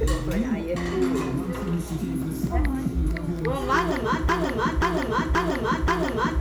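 A broken-record loop starts at 4.29 s and runs to the end at 6.41 s: a 0.53 s fragment of sound repeats exactly, back to back, four times. The likely cause is a stalled player or stream resending its last buffered piece, so the intended audio is lost.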